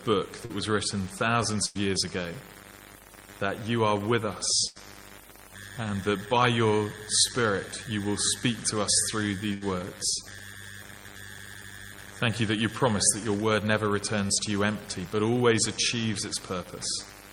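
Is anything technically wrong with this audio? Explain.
Yes. The audio has two kinds of network packet-loss damage, both patched over by the receiver.

Short concealed packet loss occurs at 0.45 to 0.52 s and at 14.27 to 14.31 s. About 40 ms and then about 20 ms of audio failed to reach the decoder in time. The receiver filled each hole by extending the sound just before it, then blended back into the real signal. Each gap passes as a quick smear or wobble.

A burst of packet loss occurs at 1.66 to 1.77 s, 4.67 to 4.77 s and 9.53 to 9.63 s. Roughly 100 ms, 80 ms and 80 ms went missing, a run of packets lost or arriving too late to play. Concealment stretched the last sound across each gap and turned it down, so it becomes a held buzz or fading hiss. The audio then picks up further along, with the lost stretch absent.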